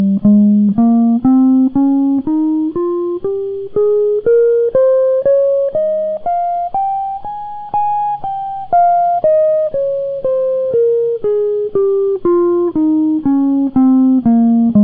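A piece of music with no technical fault to report. There is nothing here that needs a time or a cause.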